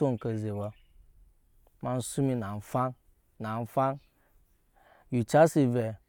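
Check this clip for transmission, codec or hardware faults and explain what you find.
I found no faults to explain in this clip.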